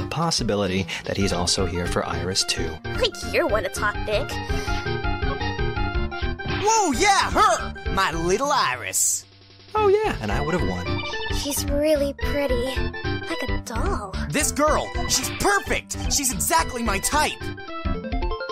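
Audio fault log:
Nothing to log here; I listened all the way through and couldn't hear a single problem.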